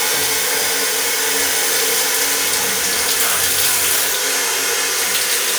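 Nothing stood out as a technical fault on listening to these sounds.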